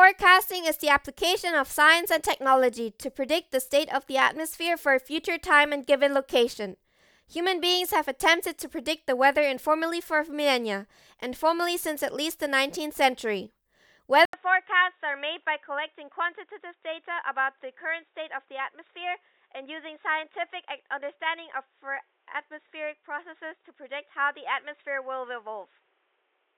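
At 14.25 s the speech drops out for 80 ms, returns about 10 dB quieter and boxy, cut off above 3.8 kHz, with faint new background noise. Level, tone and noise shifting together, not bandwidth alone, point to a likely input switched to a poorer device.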